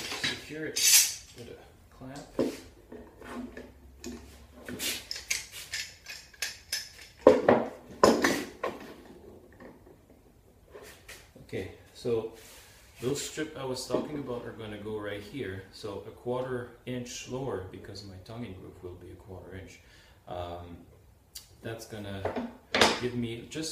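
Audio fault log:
No faults heard anywhere in this clip.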